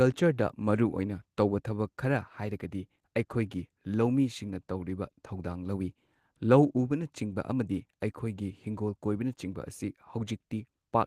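A recording of speech with no technical faults anywhere in the signal.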